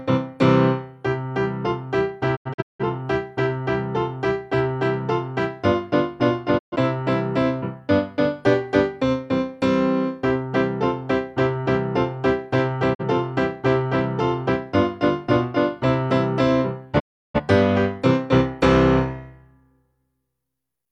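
A digital broadcast dropout occurs at 2.35 to 2.84 s, 6.57 to 6.76 s, 12.93 to 13.03 s and 16.98 to 17.40 s. The receiver mutes after corrupt frames. Sound fades out in 20 ms, then returns. The first dropout breaks into short holes.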